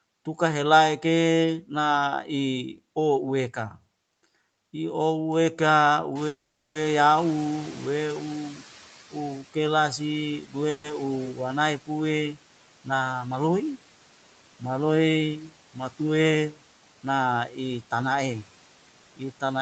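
Around 6 s the room noise jumps by about 20 dB, and the noise suppressor is caught out. From 6.15 to 9.43 s the noise comes through with less reduction at first, then sinks by about 10 dB as the estimate adapts over roughly 2.8 s.

Inside that stretch, at 6.27 s, there's a call audio freeze. The sound trails off into about 0.39 s of silence, and the whole hold lasts 480 ms. That's likely late packets draining the jitter buffer. Nothing is lost, but a gap is pushed into the stream.

At 10.43 to 10.55 s, the noise suppressor cuts into the speech itself, dipping it by about 10 dB, so that bit sounds swallowed.

A second, shorter freeze follows at 10.70 to 10.86 s. It's 140 ms of the last sound stretched out with no silence, likely another jitter-buffer underrun.

From 14.63 to 15.29 s there's a jitter-buffer speed-up. Tiny slices totalling roughly 70 ms get trimmed out, so the speech runs about 11% fast at the same pitch and sounds a bit hurried.

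Finally, at 17.48 to 17.58 s, the noise suppressor clips the speech again, this time by about 7 dB, leaving that moment faint.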